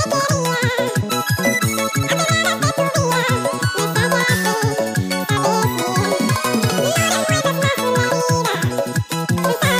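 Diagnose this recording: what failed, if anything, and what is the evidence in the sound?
Everything plays at double speed, an octave high: audio read two samples at a time, a sample-format or channel-count mismatch at the reader.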